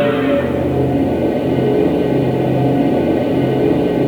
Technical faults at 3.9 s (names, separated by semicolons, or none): low bit depth without dither